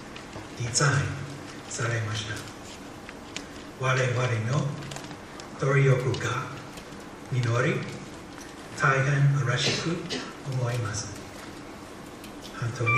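Nothing here calls for comment: the audio runs along without a single technical fault turning up anywhere.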